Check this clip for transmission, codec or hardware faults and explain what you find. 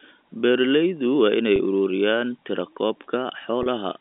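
Two brief dropouts show packet loss with pitch repetition, at 1.56 s just after "waa inay" and at 3.63 s. Each gap lasts about 30 ms, which fits a single lost packet. The receiver filled it by repeating the last pitch period of the speech, so each spot comes across as a short, slightly held, buzzy sound rather than a hole of silence. The audio travels over a G.711 telephone line, which limits it to roughly 250 Hz to 3.6 kHz.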